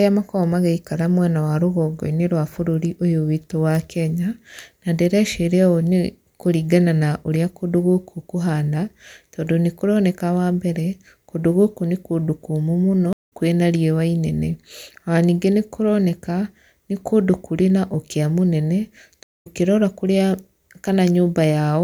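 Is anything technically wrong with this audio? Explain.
Yes, there are two stream reconnects, at 13.13 to 13.33 s and 19.23 to 19.47 s. Each time the connection dropped, the player went quiet, reconnected and started a new decoder partway through the stream. The speech cuts out for 172 ms and then 211 ms. It then resumes about a fifth of a second further on, so a short stretch is skipped rather than delayed. The restart comes in softly as the fresh decoder fades in its first frame.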